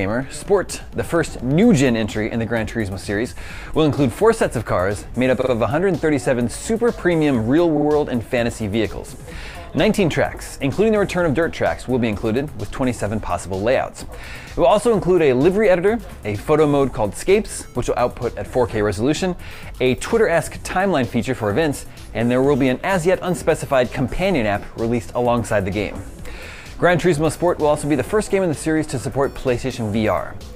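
A short stutter at 5.41 s and again at 7.76 s, where a fraction of a second of sound plays over again. These are repeated frames: compressed blocks arrived more than once and the decoder replayed them, each time adding 93 ms, which fits frames of about 46 ms.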